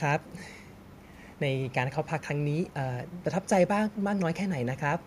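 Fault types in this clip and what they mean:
Echo leak: a faint, delayed copy of the speech returns in short scraps, lagging the original by 205 ms and sitting roughly 35 dB below it, a little stronger around 2.48 to 2.74 s. It is likely the far end's loudspeaker sound reaching its microphone and slipping past an echo canceller that did not fully remove it. Unlike room reverberation, which trails off smoothly, this is a distinct repeat arriving a fixed time late, in bursts.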